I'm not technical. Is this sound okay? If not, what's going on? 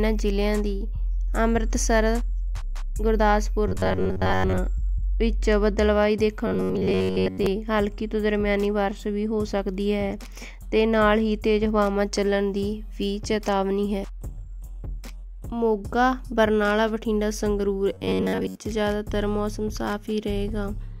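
No. Three times, from 3.68 to 4.59 s, 6.47 to 7.46 s and 17.94 to 18.58 s, new audio likely arrived too slowly, so the player kept repeating a roughly 11 ms snippet. This is robotic sound from repeated short buffers: most of each stretch turns into a stiff, metallic buzz at about 94 Hz.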